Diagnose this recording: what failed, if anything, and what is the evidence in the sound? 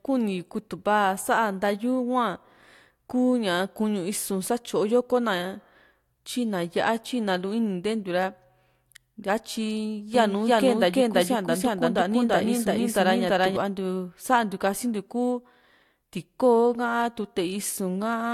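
A second, slower capture path or an edit holding two copies out of step likely caused a doubled audio track. From 10.15 to 13.57 s the speech is joined by a full-band duplicate about 300 ms behind, roughly as loud, with no decay or room colour, starting and stopping abruptly.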